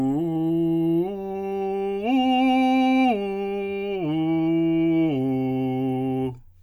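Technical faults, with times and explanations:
The music signal shows no audible technical faults at any point in the clip.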